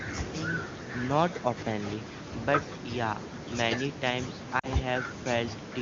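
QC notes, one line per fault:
4.59–4.67 s, lost AMR speech frames: 40 ms filled by repeating the prior frame's settings at falling gain. Heard as a brief drop toward near silence, with a waveform dip, and the voice comes back weak or rough for a moment.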